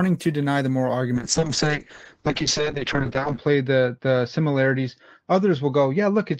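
Speech clip with a call bitrate drop from 1.16 s to the end, 32 to 6 kbps. The spectrogram's content above 8 kHz vanishes as the encoder narrows, leaving coarse, watery sound.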